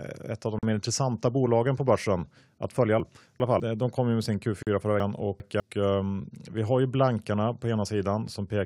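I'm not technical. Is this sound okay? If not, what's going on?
No. In this speech there are two problems. First, a gap at a join of encoded pieces: brief silences near 0.59 s and 4.63 s, each about 40 ms, four seconds apart. The audio was likely saved in separate pieces and stitched together without trimming the bit of silence each one starts and ends with.

Second, chunks out of order at 3.0 to 3.6 s and 5.0 to 5.6 s. The audio there comes in 200 ms slices, and one slice turns up two slices late. Nothing's missing, but the sound jumps around briefly.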